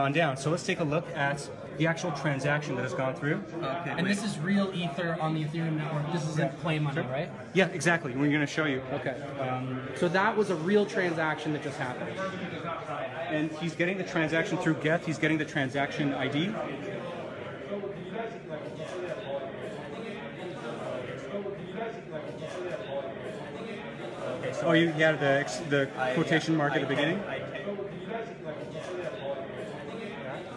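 No technical faults can be heard anywhere in the audio.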